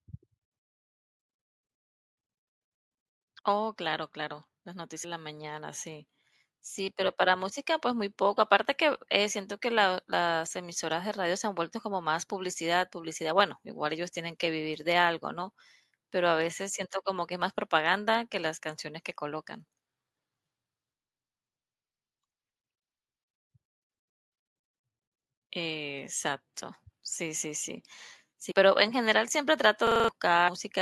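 At 28.50 s the speech jumps forward because compressed frames were skipped. Whole frames, here 24 ms long, were dropped by the decoder or missing from the stream, so about five frames, roughly a tenth of a second of speech, never play. On a spectrogram the harmonic contours break abruptly, and the waveform envelope shifts suddenly.

From 29.87 to 30.09 s a system hang loop takes over. The machine stalled while the audio hardware kept replaying the same ring buffer, so one 42.67 ms slice repeats exactly five times, which fits a 2048-sample buffer. At 23.4 repeats per second this sounds like a rapid mechanical stutter, and around a fifth of a second of real speech is lost. The waveform shows identical blocks tiled end to end, and the spectrogram shows the same short pattern stamped repeatedly, with vertical seams at each restart.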